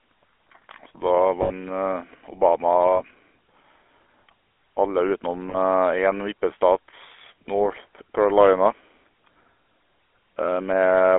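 The whole clip runs through the GSM full-rate codec, which fits 13 kbps. Speech is buzzy and gravelly, squeezed into roughly 300 Hz to 3.4 kHz. Lost GSM frames at 1.42–1.52, 2.96–3.01, 5.5–5.57 and 7.22–7.25 s get patched by repeating the last good frame, leaving a brief rough, metallic ring.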